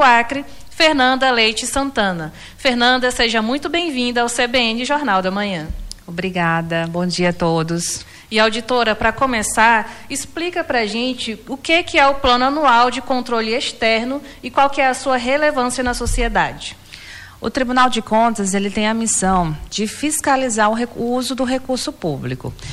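No dropouts, clicks, distortion, level jumps or timing glitches are audible at any point in the audio.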